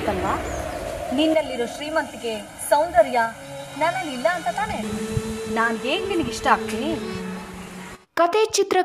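The audio has two distinct faults. From 0.64 to 0.84 s there is DAB burbling, a brief disturbance over the sound. Weak reception let bit errors slip past the error correction into the MP2 data. Corrupted samples put short blips of noise in single sub-bands. The damage spans about a dozen frames. The error rate is small, a fraction of a percent. From 1.34 to 4.83 s the sound turns hollow and phasey. This is channel delay causing comb filtering. One channel runs late by roughly 1.5 ms, and the two channels are summed to mono. Content common to both cancels at regularly spaced frequencies, with the first notch near 400 Hz. The result is a fixed, hollow coloration.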